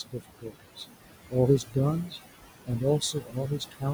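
Noise suppressor artifacts run through the whole clip: the suppressor pulls the room noise, which sits about 11 dB below the speech, down by about 19 dB frame by frame, so the background drops out in pauses and swells under the speech.

Speech cut by the noise suppressor occurs from 0.03 to 0.85 s, at 1.66 to 1.76 s, and from 3.0 to 3.85 s. The suppressor misreads quieter speech as noise and attenuates it by up to about 21 dB, for roughly half a second in the first span, a brief moment in the second and a bit under half a second in the third, leaving those parts swallowed and faint.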